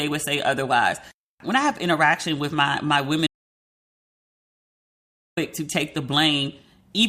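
At 3.27 s the speech cuts off into an audio dropout to silence lasting about 2.1 s, until 5.37 s, likely from the input being lost while recording continued. The waveform is a flat line there, and the spectrogram shows a fully blank band with no room tone.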